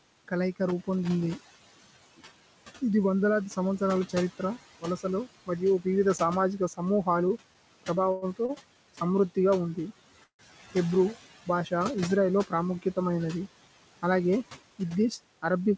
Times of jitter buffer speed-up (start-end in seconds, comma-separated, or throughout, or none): 14.11-15.04